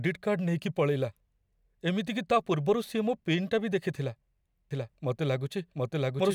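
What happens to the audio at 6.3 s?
At 6.3 s the speech is still overlaid by a second, equally loud copy of itself trailing about 0.7 s behind, so each syllable is heard twice. This doubled audio track cuts in abruptly at 4.71 s, right after "ବି ଦେଖିଥିଲା", and runs to the end. The copy is dry and full-band, with no fading tail. It is likely a second capture through a slower path, or an edit holding two out-of-step copies.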